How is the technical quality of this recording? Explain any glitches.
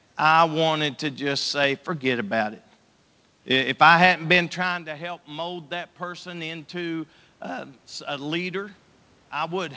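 The recording has one glitch, an automatic gain rise. It sits over a room noise floor, and the audio passes through a call codec band that stops at 8 kHz, which points to G.722.

Automatic gain rising runs from 4.64 to 8.81 s, just after "I hadn't been". The talker moves back around 4.5 s and the level drops by about 15 dB. The gain control then slowly lifts it by about 6 dB, so the voice and the room noise swell together. On a waveform the envelope climbs gradually. On a spectrogram the noise floor brightens along with the speech.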